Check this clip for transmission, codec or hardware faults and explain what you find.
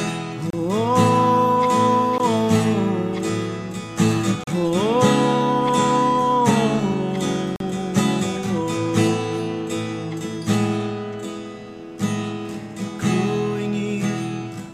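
The clip has one kind of fault, repeated four times. Bluetooth stall at 0.50 to 0.53 s, 2.18 s, 4.44 to 4.47 s and 7.56 to 7.60 s: the sound drops to silence for 17 to 43 ms, then resumes, likely because interference delayed packets and the headphone buffer emptied until resent data arrived.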